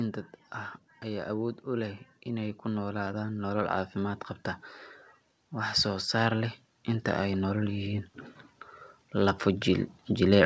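Speech carried over a call path whose spectrogram goes empty above 8 kHz, which fits a G.722 codec. Automatic gain rising lifts voice and background together, widening the waveform envelope: about 7 dB over 1.02–4.27 s, after "dad ah", and about 4 dB over 5.36–8.11 s.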